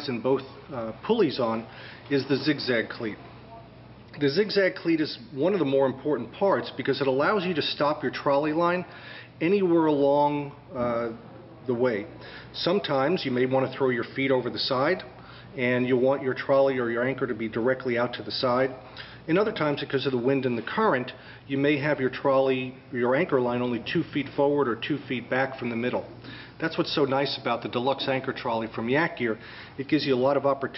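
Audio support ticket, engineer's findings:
No audible faults found; no action needed.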